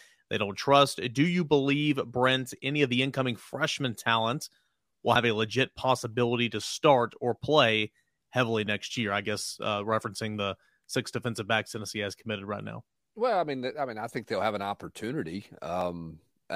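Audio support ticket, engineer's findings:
Abrupt skip forward at 5.16 s and 15.81 s, no silence at either point. Likely dropped buffer (overrun): samples not read before the hardware overwrote them, so the remaining audio is spliced edge to edge. Roughly 50 ms of speech lost at the first, about 20 ms at the second.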